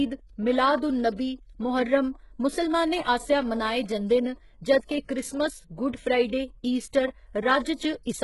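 From the start, the whole clip carries the sound of heavy low-bitrate coding, likely HE-AAC compression at a rate around 12 kbps. Nothing reaches above 11.5 kHz, and the treble that remains is rebuilt from copied lower bands instead of being coded directly, so s sounds come out gritty and lispy. On a spectrogram, the upper region looks like a blocky, repeated echo of the band below it, ending in a hard ceiling at 11.5 kHz.

Pre-echo appears first at 0.76 to 0.82 s, spreading about 59 ms ahead of an attack, and again at 1.16 to 1.19 s over about 27 ms. Near the end it returns briefly at 7.64 s, about 14 ms long, and then at 7.75 to 7.80 s over about 49 ms. Each time, the coding noise sized for a loud onset leaks into the quiet moment before it, so a short hiss comes just before the attack and the attack itself sounds softened. On a waveform, a low smear of noise sits just ahead of the sharp rise, and on a spectrogram, broadband speckle fills the gap before the onset.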